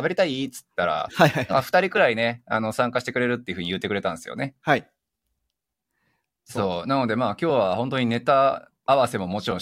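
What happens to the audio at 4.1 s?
Nothing goes wrong at 4.1 s; the speech carries on intact through that moment, with no dropout, click or distortion to be heard.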